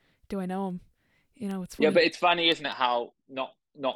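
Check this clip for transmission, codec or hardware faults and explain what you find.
A digital link in the chain is being received by a device running on its own clock instead of locking to the sender's, producing word clock ticks from 0.30 s to 3.94 s. The two clocks disagree by around 100 ppm, so they slip past each other about five times a second. At each slip one sample is dropped or repeated. Over the speech this comes through as around twenty ticks at a steady rate.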